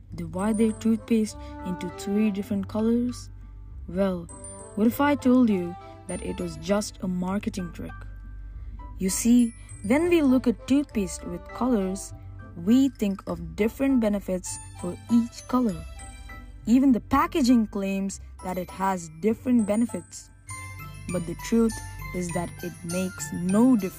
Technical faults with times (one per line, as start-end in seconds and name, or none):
14.40-22.40 crude rate conversion